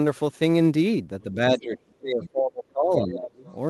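From start to finish, the converter's sample clock wanders by something like ten microseconds, so each sample is taken a little early or late at random. This is sample clock jitter. The timing error does the most damage where the waveform changes fastest, leaving a fine hiss and graininess around 30 dB below the speech. The roughness thickens on loud and bright syllables and drops away in the pauses.

From 1.31 s to 3.46 s, speech is suppressed in double talk. The echo canceller likely lost track of which sound was the local talker and which was loudspeaker echo while both sides spoke at once, so it clamped down on everything. Over roughly two seconds of that stretch the voice sags, dulls or breaks into pieces, with the deepest dips falling around 25 dB.

Inside that stretch, from 2.23 s to 2.30 s, the other side's voice leaks through. Some of the far end's loudspeaker sound likely got past the canceller into the microphone. 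It appears as a brief scrap about 20 dB under the main speech. A second, fainter fragment of the other side's voice follows at 3.47 to 3.52 s, just after the suppression lifts, sitting about 35 dB down.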